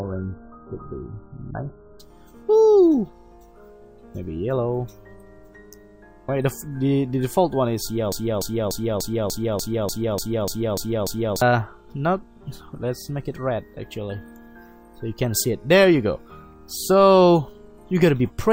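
The adaptive stream started at a low bitrate: from 0 to 2.0 s nothing is heard above 1.8 kHz, then the quality jumps up with no gap.

From 8.12 to 11.42 s the stream likely stalled and kept resending its last fragment. This broken-record loop repeats one 0.29 s piece 11 times.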